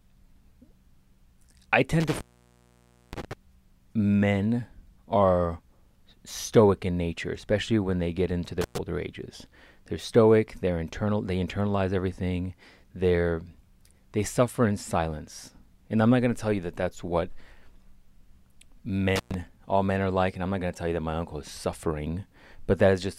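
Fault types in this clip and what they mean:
Intermittent contact: at 2.0, 8.61 and 19.16 s a loose connection opens, dropping the speech for 0.92 s, then 0.11 s twice, with edge crackle.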